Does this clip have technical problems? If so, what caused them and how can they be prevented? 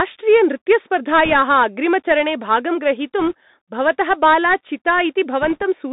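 Yes. The whole clip has passed through the Bluetooth CVSD headset codec. This narrowband scheme sends one up-or-down bit per sample, which fits a 64 kbit/s stream, and its step size adapts as it tracks the waveform. Here the sound is confined to roughly 150 Hz to 3.7 kHz, so it is thin and boxy. The step cannot keep pace with loud, sharp high content, which leaves a scratchy edge and a grainy hiss underneath. On a spectrogram this shows as a hard ceiling near 3.7 kHz with nothing above it, plus a speckled noise floor across the band. It can be prevented by switching the headset to a wideband voice profile such as mSBC or LC3, or by recording with a wired microphone.

There are also bit errors on a Bluetooth voice link at 1.25–1.34 s, 3.20–3.33 s and 5.42–5.63 s. During these bursts the link flipped roughly one to one and a half percent of the bits. Each CVSD bit moves the signal only a small step, and the decoder recovers quickly, so the result is a brief rushing crackle rather than loud clicks. 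On the waveform these stretches look fuzzy and roughened but have no tall spikes. The spectrogram shows short patches of broadband grainy noise filling the band. These errors can be prevented by keeping the headset close to the receiver and away from 2.4 GHz interference such as Wi-Fi routers.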